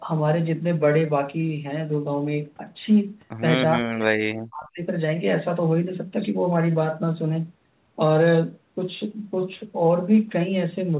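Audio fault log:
3.76–4.81 s, speech suppressed in double talk: for about a second the speech falls away, dropping by about 40 dB at its deepest. On a waveform the envelope shrinks sharply. On a spectrogram the harmonics fade across the whole band, which ends at 4 kHz. The likely cause is an echo canceller that mistook this talker for loudspeaker echo while both sides spoke and attenuated it.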